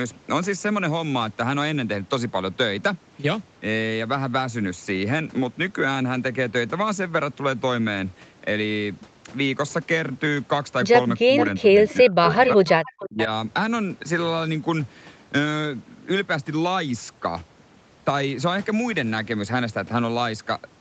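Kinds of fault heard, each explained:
Speech suppressed in double talk: Between about 11.3 and 13.3 s, the talker's level sinks in bursts, by as much as about 35 dB from 11.6 to 12.7 s. This is likely an echo canceller turning both sides down while the other party spoke.
Echo leak: From 11.37 to 13.25 s, scraps of the voice played on the loudspeaker return 442 ms late. At their loudest they sit about 10 dB below the speech. This is likely residue a loudspeaker-side canceller failed to remove. The fixed delay distinguishes it from smooth, continuous room reverberation.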